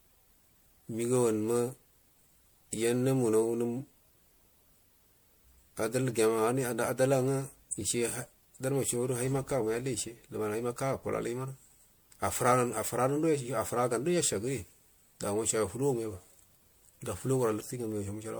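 Speech with generation loss throughout: attacks blur and the sound is more swirly, hollow and smeared than a single MP3 encode would explain, likely from roughly seven successive encodes.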